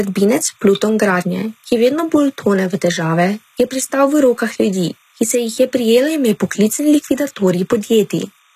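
From start to finish, a faint, steady chirping warble sits far beneath the speech, flipping between pitches near 1 and 2 kHz. This is timecode bleed: a linear timecode square wave, at a rate that fits 30-frame code, leaking into the audio path from an adjacent track or cable.

Also throughout, the upper range is clearly damaged. The treble sounds bright yet synthetic, s sounds turn gritty and lispy, and nothing remains above 14.9 kHz. The likely cause is HE-AAC compression at a low bitrate around 20 kbps, rebuilding the treble by copying lower bands upward.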